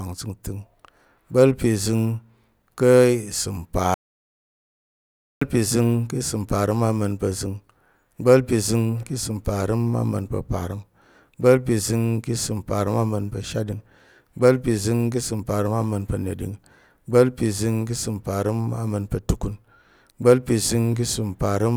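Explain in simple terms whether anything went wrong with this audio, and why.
From 3.94 to 5.41 seconds, the speech cuts out completely for about 1.5 seconds. This is an audio dropout to silence. The gap is total silence, with no background sound. The input was likely lost while recording went on. That speech is gone.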